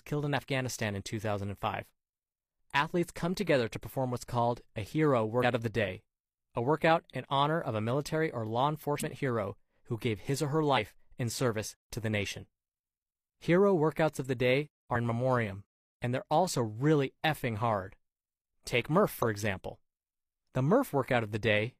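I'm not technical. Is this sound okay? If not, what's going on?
No. At 5.39 s, after "what's called a hero", the speech jumps ahead by about a tenth of a second. Smaller jumps of about a twentieth of a second follow at 8.97 s (after "a military or law"), 10.73 s and 14.91 s (after "workouts of the day"). These are compressed frames skipped: chunks of the compressed file never play. At 19.14 to 19.24 s a brief burst of garbled sound appears, from a corrupt frame decoded: a couple of damaged chunks were played anyway.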